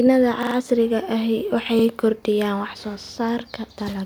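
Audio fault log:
0.43–3.12 s, repeated buffer: new audio reached the output late three times, so the device replayed its last 43 ms block, which fits a 2048-sample buffer. Each replay is a hard-joined stutter: three extra plays at 0.43–0.56 s, one at 1.79–1.84 s, two at 3.03–3.12 s.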